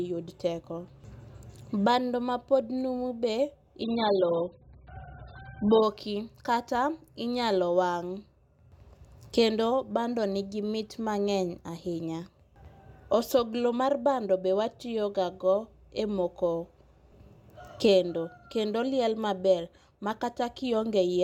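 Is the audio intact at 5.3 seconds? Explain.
No. An adaptive stream at a lower bitrate runs from 3.83 to 5.83 s, after "ma pod numu be": the sound abruptly loses everything above 5 kHz and turns smeared, which fits a drop to roughly 8 kbit/s.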